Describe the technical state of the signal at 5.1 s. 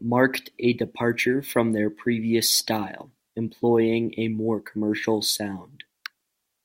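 At 5.1 s the speech signal is intact, with no audible fault at that moment.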